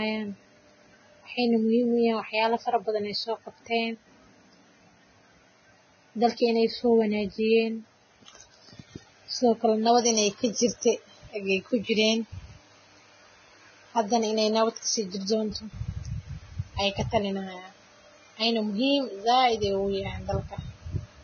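All the way through, the speech sounds hissy and grainy with nothing above 6.5 kHz, likely heavy Vorbis compression at a very low bitrate smearing treble into noise.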